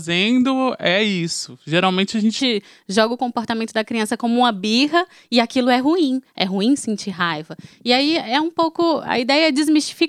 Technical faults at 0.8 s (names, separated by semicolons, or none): section at the wrong speed